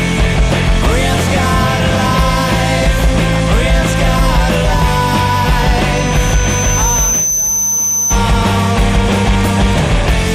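From 5.93 s to 8.24 s a loudspeaker feedback squeal appears: a pure 6.1 kHz tone swells over roughly a second and a half to about the level of the surrounding sound. The microphone is re-amplifying its own loudspeaker, with loop gain above one at that frequency.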